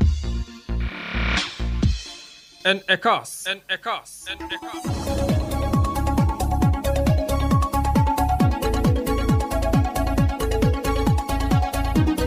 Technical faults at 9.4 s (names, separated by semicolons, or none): none